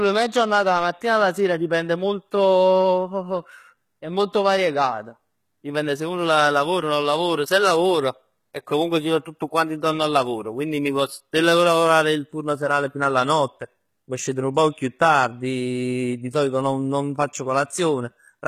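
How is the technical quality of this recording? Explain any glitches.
The quality's compromised by codec damage that's plainly audible the whole way through. It sounds like HE-AAC compression, likely at a low bitrate around 20 kbps. The top end is rebuilt by copying lower bands upward, so the treble is not the original, with gritty, lispy s sounds and nothing above about 14.9 kHz.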